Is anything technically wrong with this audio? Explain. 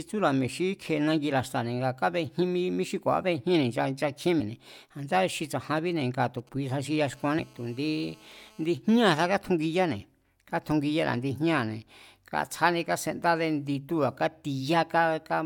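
Yes. The speech has three kinds of fault.

Compressed frames are skipped at 2.41 s, just before "mí xí", at 4.39 s and at 7.38 s. Whole blocks of the compressed audio never reach the output. Each jump removes roughly a tenth of a second, a little less at 4.39 s. That fits a few frames of about 21.3 ms each.

GSM signalling bursts appear from 5.77 to 6.96 s. A nearby 2G phone is exchanging short groups of radio bursts with the network, and the audio circuit rectifies them. They come through as a galloping dit-dit-dit of brief 217 Hz buzzes, about 30 dB below the speech.

GSM phone buzz follows from 7.13 to 8.66 s, overlapping the third skip. The phone is now in a call and transmitting steadily at 217 bursts per second. The rectified pulses make a hard, raspy buzz rich in harmonics. It sits about 31 dB below the speech and has no relation to it.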